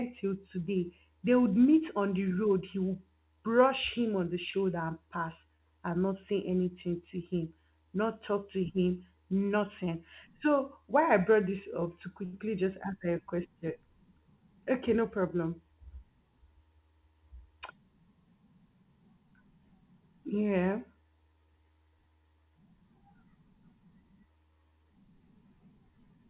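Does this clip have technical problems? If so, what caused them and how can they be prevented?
Yes. There are two kinds of fault, both from packet delivery on a narrowband call path. That path has nothing above 4 kHz, which fits G.711 A-law.

Short concealed packet loss occurs twice. The first is at 4.51 to 4.55 s, after "him on the" and before "and pass and". The second is at 5.57 to 5.61 s, after "and pass". Each time about 20 ms of real audio is gone. The receiver invented a replacement by extending the preceding sound and then cross-fading back, which leaves a brief smear or wobble. Unlike a stall, the original audio is lost rather than delayed. Forward error correction or redundant packets on the sending side would protect against this.

A short stall from a late packet comes at 12.25 to 12.35 s, after "brought this up to". The jitter buffer ran dry, so the receiver held the last sound for about 78 ms until the packet arrived and then carried on from the same point. 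Nothing is missing. Instead, a sound drags on too long and everything after it shifts about 78 ms later. That distinguishes it from concealed loss, which drops audio without shifting the timing. A deeper or better-adapting jitter buffer would absorb this kind of delay.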